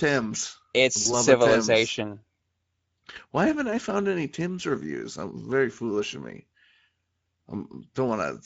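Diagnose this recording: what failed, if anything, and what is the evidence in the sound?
The codec stage failed throughout: the speech carries plainly audible Speex codec damage, a hoarse, noisy roughness where the low bit budget cannot code the excitation cleanly. The degree of damage points to a mid-rate Speex mode of roughly 16.8 kbps. On a spectrogram the harmonics look smeared, with grainy noise filling the gaps between them. The waveform shows voiced periods that are less regular than clean speech.

A network fault appears from 1.03 to 1.08 s as VoIP packet loss concealed by the speech codec. The decoder filled the gap by extending its last pitch and spectral envelope, so the sound is briefly stretched and then weakens. The gap's length fits a single lost 20 ms frame. Because the decoder's state was rebuilt from the guess, recovery lags the gap by tens of milliseconds or more. On the spectrogram the harmonics freeze into flat lines, and the waveform envelope dips there.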